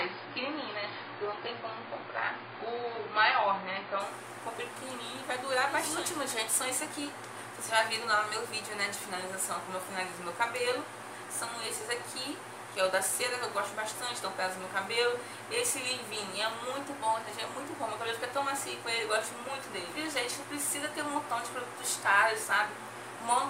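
For the first 4.0 s the adaptive stream is starting at a low bitrate: the audio is dull and smeared, with nothing above 5 kHz, which fits a very low-rate AAC stream near 16 kbit/s. At 4.0 s the player steps up, with no gap, to a rate consistent with about 96 kbit/s. On a spectrogram a flat ceiling at 5 kHz abruptly lifts there.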